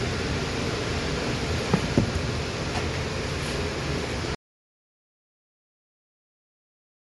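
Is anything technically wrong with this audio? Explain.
Yes. Throughout, the sound is grainy and breathy with nothing above 11.5 kHz, likely from Bluetooth LC3 compression discarding the upper spectrum and filling the gaps with noise.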